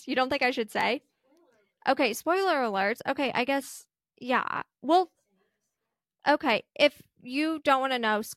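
No technical faults can be heard anywhere in the recording; the signal stays continuous and steady throughout.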